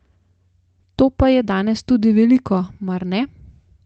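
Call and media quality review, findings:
No findings: speech comes through the call path with its top end stopping near 8 kHz, consistent with Opus at a wideband setting, and nothing raised.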